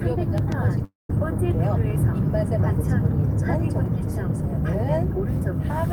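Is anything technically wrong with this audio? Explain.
Yes, there are two faults.

From 0.38 to 0.54 s there is a loud pop, made up of two pops in quick succession. A sudden voltage step, likely from a plug, switch, static discharge or driver glitch, entered the signal path, and the circuitry downstream shaped it into a short pulse. The result is a sharp double thump that peaks a few decibels above the surrounding sound, which carries on beneath it.

From 0.84 to 1.10 s there is a long network dropout. About 250 ms of audio never reached the player, likely because a stream of packets was lost or delayed in transit. The receiver tried to cover the gap by extending the last sound it had. That fill decays into a fading buzz or hiss and then about 170 ms of near silence, and the audio resumes afterwards with the lost stretch simply missing.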